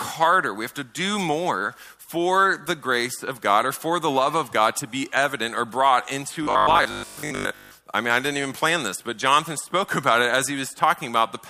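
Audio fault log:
6.43–7.79 s, robotic sound from repeated short buffers: the audio turns stiff and metallic with a steady 50 Hz buzz. It's likely that new data arrived too slowly, so a 20 ms chunk kept looping and replaced most of that stretch while the real audio got skipped.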